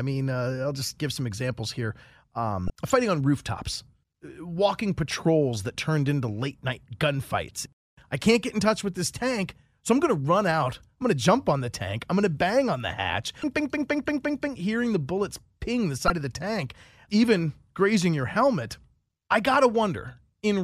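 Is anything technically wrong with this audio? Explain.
Yes. The speech carries three brief bursts of damaged data in a compressed stream, at 2.67–2.70 s, 13.40–13.44 s and 16.07–16.10 s, each lasting about 30 ms. In these spots the encoded bytes are corrupted, so the decoder misreads the frames, loses sync and hunts for the next valid header. Each is heard as a brief chirp, squawk, click or short hole.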